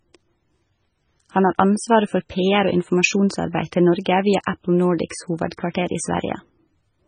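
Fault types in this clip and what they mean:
MP3 compression: the speech likely passed through an MP3 encoder starved of bits, and the heavy damage points to roughly 16 kbps. The treble is cut, with nothing above 9.4 kHz, and weak frequency lines flicker between frames, giving a watery, swirling sound.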